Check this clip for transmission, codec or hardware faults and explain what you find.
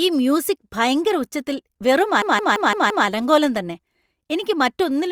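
A system hang loop runs from 2.22 to 3.07 s, right after "മ്യൂസിക് ഭയങ്കര ഉച്ചത്തിൽ വെറും" and before "അലങ്കോലം തന്നെ എനിക്ക്". The driver stalled while the hardware replayed one 171 ms buffer, which fits an 8192-sample buffer, five times. At 5.86 Hz, it sounds like a machine-gun stutter.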